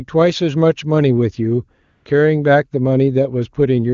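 AMR comfort noise from 1.83 to 2.05 s: the sending phone judged the talker silent and stopped transmitting speech frames for about 220 ms. The receiver filled that gap with synthetic noise built from a coarse level and spectrum estimate, so the real background gives way to a smooth, steady hiss that switches in and out.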